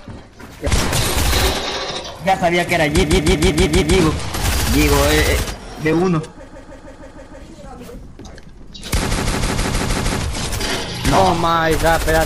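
Repeated frames cause a stutter from 3.02 to 3.96 s, 6.47 to 7.41 s and 9.11 to 10.20 s. The same 156.7 ms block plays again six, six and then seven times, adding time rather than losing any. That sets it apart from a dropout.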